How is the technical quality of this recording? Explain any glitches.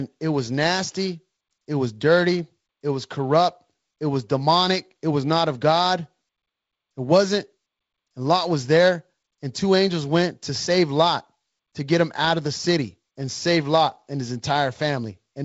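No glitches to report: the speech carries the band-limited character of G.722 wideband telephone coding, with nothing above 7.7 kHz and a light coding hiss that fits the 48 kbit/s mode.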